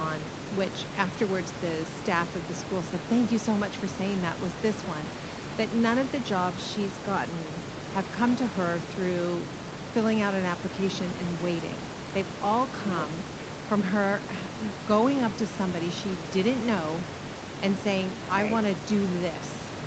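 The speech sits in a call-grade band that stops at 8 kHz, with room noise about 11 dB beneath it and the usual coding texture of a call codec, and there are no technical faults anywhere in the signal.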